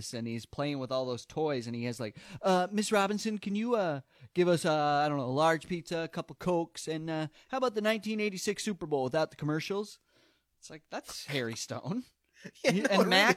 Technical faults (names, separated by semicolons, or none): none